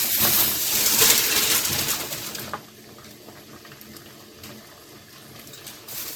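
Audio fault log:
Throughout: generation loss. The whole clip has a swirly, hollow, smeared character, with transients blurred and soft rather than crisp, and content still reaching up to 20 kHz. That's more damage than one lossy pass would leave. It's likely from MP3 re-encoding around seven times, at a rate that points to roughly 96 kbit/s. Each decode-and-re-encode requantises on a shifted frame grid, so noise and spectral holes stack up.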